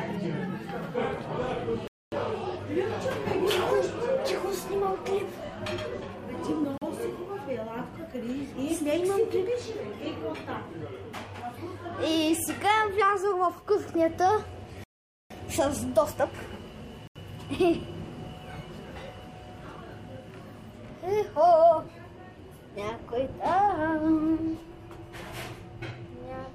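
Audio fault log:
1.88–2.12 s, 6.78–6.82 s, 14.84–15.30 s, 17.07–17.16 s, Bluetooth stall: clean silences of 0.25, 0.04, 0.47 and 0.08 s, likely from the headphones' buffer emptying while resent packets arrived. Sound resumes where it stopped.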